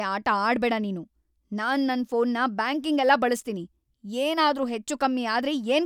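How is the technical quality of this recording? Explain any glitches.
No glitches can be heard anywhere in the recording. The speech runs without any break or disturbance in the signal.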